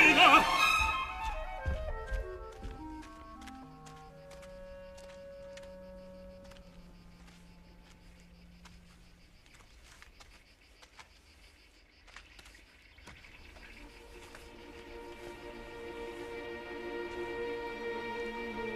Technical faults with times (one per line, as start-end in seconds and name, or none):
8.53 dropped samples
13.29 dropped samples